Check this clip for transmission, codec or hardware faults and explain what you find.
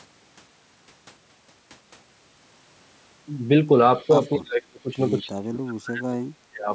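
Two related faults appear in the second half of this speech clip, both pointing to a loudspeaker-side echo canceller struggling.

Echo leak, from 3.96 to 4.32 s and again from 5.07 to 5.18 s: a faint delayed copy of the speech trails the original by about 247 ms, sitting roughly 35 dB below it. The likely cause is a far-end echo canceller that let part of its microphone pickup through. On a spectrogram this shows as a weak, smeared duplicate of the harmonic striations shifted a quarter-second to the right. In the waveform it is a low-level ripple, not a clear second envelope.

Speech suppressed in double talk, from 4.37 to 4.98 s and from 5.21 to 6.7 s: the talker's level dips in chunks while the other side is active, falling by around 35 to 40 dB at its deepest, for about two seconds in total. This likely comes from the canceller mistaking overlapping talk for echo and attenuating everything. 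The waveform envelope collapses in gated steps, and the spectrogram shows harmonics thinning or vanishing in blocks, with the upper band stopping at 8 kHz.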